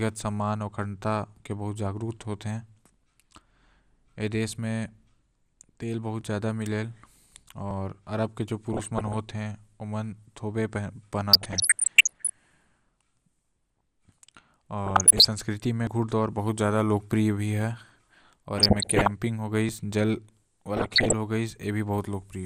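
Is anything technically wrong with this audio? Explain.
Yes. The speech sounds dull and granular throughout. This is likely MP2 compression, which drops upper sub-bands and coarsely quantises the rest, consistent with a low bitrate around 80 kbps.

At 6.21 s and 15.87 s there is a jump in the sound. This is likely a dropped buffer (overrun), where unread samples were overwritten and the ends spliced together. The first loss is about 10 ms, the second about 40 ms.

DAB burbling occurs at 8.70–9.17 s, 11.32–12.30 s, 14.86–15.26 s, 18.57–19.11 s and 20.77–21.13 s. Bit errors corrupt the MP2 data, so wrong samples hit single sub-bands. The result is short blips of noise, worst where errors are heaviest.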